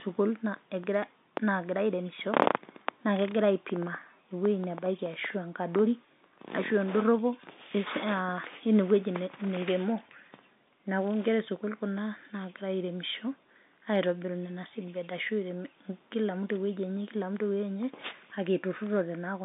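Nothing is technically wrong with this speech recording, which comes over a telephone line band.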